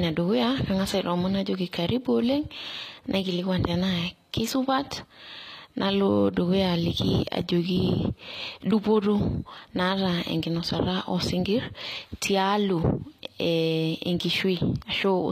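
From start to finish, the speech carries plainly audible codec damage, most likely from HE-AAC compression. Nothing reaches above 14.9 kHz. The treble is rebuilt rather than real. Lower bands have been copied upward and shaped only roughly, so the upper harmonics fail to line up with the ones below. S sounds come out gritty and lispy, with a metallic edge. The audible damage fits a low bitrate, around 24 kbps.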